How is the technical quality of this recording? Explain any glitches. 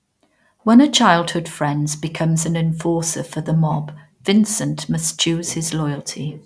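Nothing stood out as a technical problem on listening to this recording, and there are no glitches to explain.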